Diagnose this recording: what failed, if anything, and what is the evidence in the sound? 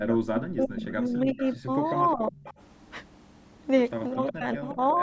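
Call processing stage, speech suppressed in double talk: the level sinks by roughly 30 dB over 0.0–1.7 s and 4.14 s to the end, and by about 20 dB at 2.13–2.33 s. The likely cause is an echo canceller ducking its own talker along with the loudspeaker echo. On a waveform, the envelope collapses in chunks; on a spectrogram, energy thins.

Echo leak, also in call processing: a copy trailing the speech by 359 ms appears at 0.12–0.17, 1.38–1.54, 1.84–2.54, 4.25–4.33 and 4.7–4.93 s, about 10 to 25 dB down. This is likely an imperfectly cancelled loudspeaker echo. On a spectrogram, it shows as weak, ghostly repeats of the harmonic patterns, offset in time.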